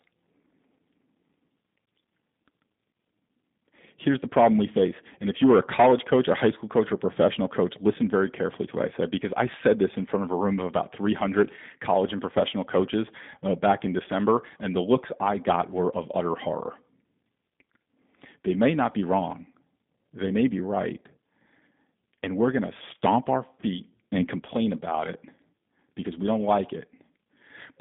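Speech passed through the G.729 codec for its whole length. Its coding, which fits the 8 kbit/s G.729A variant, rebuilds the sound from a filter model and sparse pulses, so the voice comes across plainly rough and synthetic, confined to about 150 Hz to 3.7 kHz, with nothing above 3.8 kHz.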